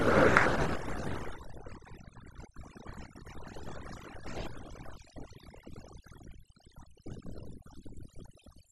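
A noise reduction stage set too aggressively runs through the whole of this speech recording, a clear case of overdone noise removal. It pushes individual frequency bands down or out wherever they sit close to its noise estimate, so the background drops and breaks up into twinkling specks, while softer parts of the voice are stripped away.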